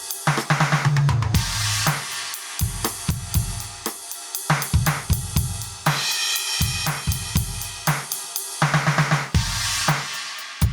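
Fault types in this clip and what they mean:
Gain pumping: The input gain was likely set far too high, so a fast limiter keeps clamping down on each loud passage of the music. The level swings by roughly 10 dB throughout, with the dynamics sounding squashed.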